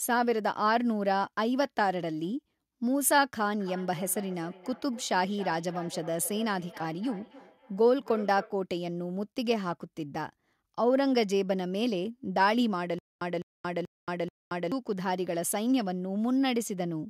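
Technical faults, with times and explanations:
3.6–8.61 s: feedback echo between two devices. Each phrase returns after roughly 300 ms, thinner and more ringing with every pass, and the loudest repeat sits about 17 dB below the speech. Two devices in the room share the call, so one device's loudspeaker feeds the other's microphone, and neither echo canceller removes sound it didn't play itself. On a spectrogram, fading copies trail each syllable at even spacing, losing low end each time.
12.99–14.72 s: stutter with silent gaps. A 206 ms fragment plays four times, each followed by 227 ms of digital silence, so the burst returns every 433 ms at a rigid, mechanical pace. The likely cause is a stalled stream or player replaying its last fragment at each retry and then running dry, so the speech due in that span is lost. The waveform shows identical blocks separated by flat silent stretches, and the spectrogram shows empty columns between them.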